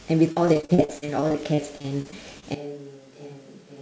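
From 0.32 to 2.44 s, repeated packet loss (robotic sound) chops the speech with roughly twenty short holes, the longest 44 ms, each patched by stretching the previous sound. About a quarter of that span is concealed. It sounds choppy, with pieces missing. The waveform shows runs of identical repeating cycles, and the spectrogram shows smeared, flat-topped harmonic bands.

At 2.55 s the sound turns hollow and roomy until the end, most likely a switch to a distant microphone. The level drops by about 10 dB, and room noise sits about 30 dB below the speech. The waveform steps down abruptly. On the spectrogram, below the call path's 8 kHz ceiling, the bass thins, reverberant tails blur the syllables, and the noise floor rises.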